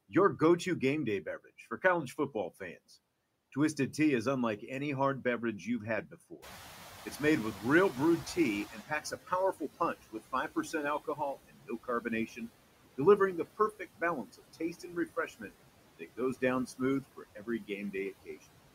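Noise suppressor artifacts run through the whole recording: the steady background is pulled down by about 17 dB, sinking between phrases and swelling under the talker. Unlike a gate, the noise never drops fully out.

From 6.11 to 6.45 s, right after "hard beverage you've had", there is the first speech cut by the noise suppressor. Quiet parts of the speech are treated as noise and dipped by up to about 11 dB for roughly a tenth of a second. Further cuts come at 7.54 to 7.96 s (about 8 dB), 8.75 to 12.41 s ending before "delivering the" (about 18 dB, around a second in total), 13.45 to 15.51 s and 15.99 to 18.43 s (both about 17 dB, under a second each). The cut speech sounds swallowed or faint, not clipped or distorted.

Overlapping this, the room noise jumps by about 17 dB near 6.5 s, and the noise suppressor is catching up from 6.42 to 9.13 s. The louder noise comes through with less reduction, then fades over about 2.7 s as the suppressor's estimate adapts, reaching about 14 dB of cut. 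That gradual slide, not a step, separates it from a level change.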